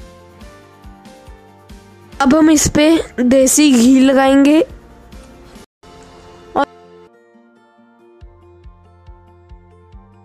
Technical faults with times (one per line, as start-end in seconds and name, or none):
5.64-5.83 corrupt frame muted